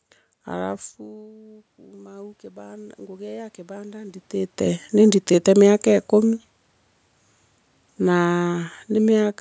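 Automatic gain rising runs from 0.64 to 4.25 s in this speech recording. The talker backs away at about half a second and the input drops about 20 dB, so the gain control slowly climbs about 13 dB, swelling voice and room noise together.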